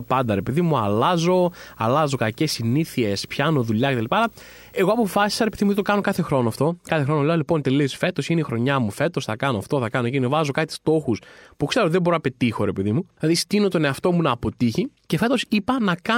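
Until 6.01 s, before "κάθε χρόνο αυτό", a low 59.94 Hz buzz with hash and a 15.7 kHz whine: video or display buzz from screen coupling.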